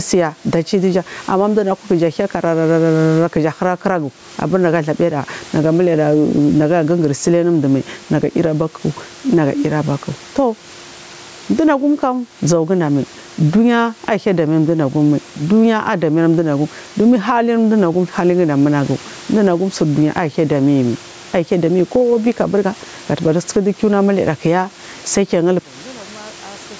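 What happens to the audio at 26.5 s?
From 25.59 s to the end at 26.79 s the level collapses by about 30 dB, leaving only a faint residue; one channel is likely inverted, cancelling the centred speech in the mono sum. Throughout, including here, the gain swings by roughly 15 dB, likely gain pumping from a fast limiter on excessive input gain.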